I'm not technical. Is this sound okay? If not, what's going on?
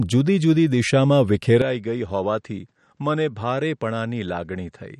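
No. The whole clip has MP3 compression damage, likely from saving it at a low quality setting. Nothing above about 11.8 kHz survives, and quiet detail swirls and warbles. This is steady from start to finish, not a sudden change.

At 1.6 s, right after "જુદી જુદી દિશામાં", an input switched to a poorer device is likely. With no gap, the sound turns duller and boxier, loses everything above about 8.7 kHz, drops noticeably in volume, and gains a very faint new background noise until the end.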